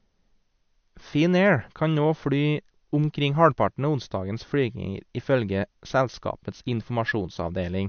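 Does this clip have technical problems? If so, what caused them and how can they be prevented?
Yes. MP3 compression artefacts run through the whole clip. Nothing reaches above 6.5 kHz, and the speech has a plainly audible watery, swirling quality, with chirpy sibilants and smeared consonant onsets. The likely cause is a low-bitrate MP3 encode, which fits 48 kbps. Short of bits, the encoder cut the treble at a fixed frequency and zeroed weak frequency lines that flicker between frames. Encoding at a higher bitrate or keeping a lossless master would prevent it.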